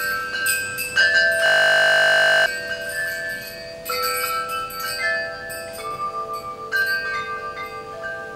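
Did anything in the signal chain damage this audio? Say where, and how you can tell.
Yes. At the driver or buffer stage there is a system hang loop from 1.46 s to 2.46 s. The same 20 ms slice of sound repeats 50 times, producing a steady buzz at 50 Hz in place of about a second of real audio. The waveform shows identical 20 ms cycles stamped end to end. The spectrogram shows a flat comb of harmonics spaced 50 Hz apart with no movement. The system stalled while the hardware kept replaying the same ring buffer.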